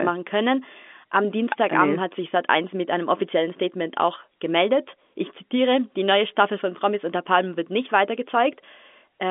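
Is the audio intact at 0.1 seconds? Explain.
Yes, the audio is intact at 0.1 s, with only the narrow telephone band of G.711 telephone coding that runs through the whole clip.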